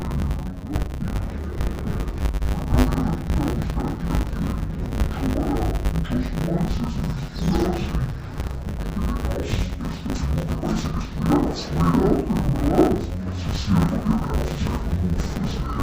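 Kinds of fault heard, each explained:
Interleaved audio read as planar: Each 10 ms block of alternating left and right samples is split into halves and treated as separate channels. Both halves play at half speed. With blocks this short, the sound turns dull and robotic throughout, buzzing at 100 Hz.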